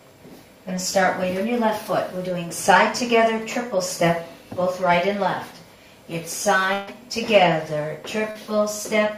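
At 6.73 to 6.89 s, a burst of packet loss drops about 140 ms of audio; the receiver stretches the last sound into a fading buzz or hiss, then resumes further on. At 8.31 to 8.37 s, short concealed packet loss covers a 40 ms hole with extrapolated sound, heard as a brief smear or wobble.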